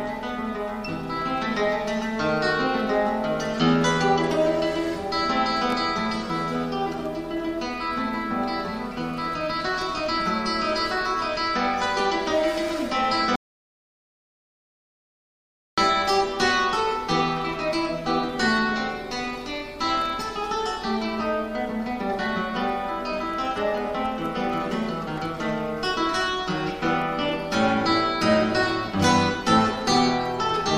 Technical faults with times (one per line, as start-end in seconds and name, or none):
13.36-15.78 audio dropout to silence